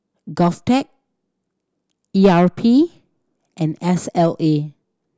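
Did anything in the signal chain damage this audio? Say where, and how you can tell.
No, no damage is audible.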